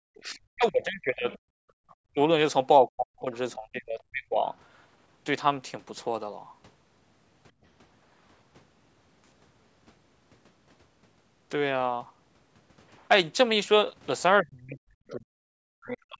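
From 0.06 to 1.26 s, 2.03 to 2.2 s and 2.88 to 4.43 s the speech is suppressed in double talk. The talker's level plunges by roughly 40 dB, likely because the echo canceller could not separate the far voice from the near one. On a waveform the envelope collapses into thin stubs, and a spectrogram shows the harmonics fading.

From 1.3 to 1.95 s the other side's voice leaks through, faint, some 25 dB under the talker. It is likely residual loudspeaker echo, appearing as a weak second set of harmonics.

Within that stretch, from 1.54 to 1.75 s, the background is gated by the echo canceller, dipping about 27 dB. The noise floor drops to a dark notch across all frequencies.

A milder gate at 7.52 to 7.65 s pulls the room sound down about 13 dB.

Double-talk suppression returns from 14.41 s to the end, likely the same cause, with deep gaps in the waveform. A brief leak of the far voice at 15.08 to 15.12 s shows as a faint smudge about 25 dB below the speech.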